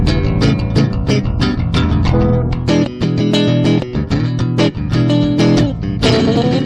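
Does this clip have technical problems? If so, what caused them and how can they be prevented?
No, nothing here stands out as a technical problem, so there's nothing that needs preventing.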